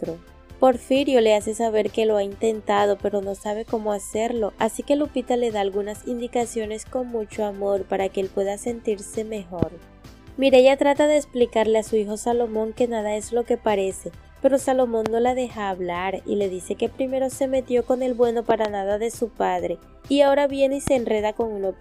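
Loud pops hit at 9.63–9.65 s, 15.06–15.08 s, 18.50–18.67 s and 20.87–20.90 s. The third is a double pop. Each is a sharp thump about 15 dB above the sound, the last nearer 10 dB. The sound continues underneath. A sudden voltage spike is the likely cause.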